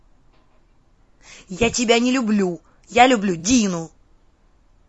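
Throughout, the speech sounds rough and grainy, with noise between harmonics and a dulled top band. This is likely low-delay AAC compression at a low bitrate, around 32 kbps.

From 3.39 to 3.44 s comes AAC frame loss with concealment. About 40 ms went missing, which fits two lost frames. The decoder patched the gap with a smeared, noisy or phasey stretch.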